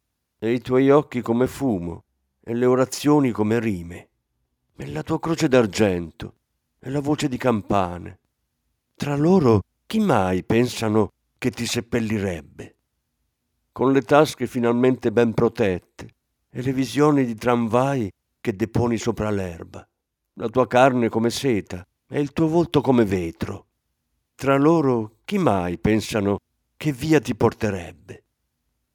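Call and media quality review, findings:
Nothing to flag on this speech recording; I listened through and heard no faults worth a ticket.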